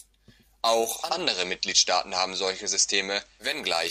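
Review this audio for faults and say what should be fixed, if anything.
Hiss rises from 0.87 to 3.57 s: digital radio blending to analogue, a 370 ms cross-fade to FM with hiss roughly 35 dB below the signal. Better antenna placement or a stronger digital signal would keep the receiver from falling back to FM.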